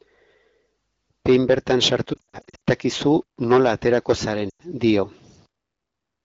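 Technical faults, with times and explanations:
1.92–6.24 s, low bit depth without dither: the signal was likely rounded to about 8 bits with no dither, so quiet passages turn gritty, with grain roughly 40 dB below the sound.
2.13–2.60 s, lost AMR speech frames: scattered frame losses totalling 280 ms, runs up to 60 ms, make the wideband decoder repeat and fade its last good settings, giving repeated dips and warbles.
4.49–4.62 s, lost AMR speech frames: 100 ms of lost frames drops to near silence within two frames as the wideband decoder reuses stale settings, and the speech then returns briefly weak.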